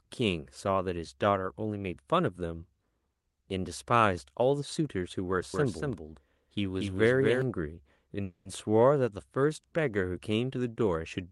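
A doubled audio track runs from 5.54 to 7.42 s. Beneath the speech, a second full-band copy trails by about a fifth of a second, roughly 5 dB quieter than the original. It carries no room colour or decay, so it reads as a crisp, flat repeat rather than an echo, and it begins and ends abruptly at those two points. The cause is likely a second capture arriving through a slower path, or an edit leaving two out-of-step copies layered together.

A call audio freeze occurs from 8.23 to 8.48 s. Here the speech stalls and the last sound is drawn out as a fading buzz or hiss, ending in about 60 ms of silence, for about 220 ms in all before the speech picks up again. This is likely packets being held up in transit until the jitter buffer ran dry, with the receiver filling the wait itself. Nothing is lost, but from this point on the speech runs about 220 ms later than it would have.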